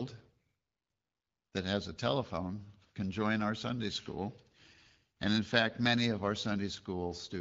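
No technical faults occur at any point in the speech.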